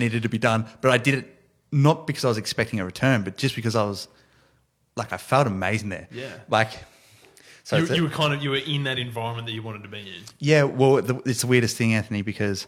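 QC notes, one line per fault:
No faults heard anywhere in the speech.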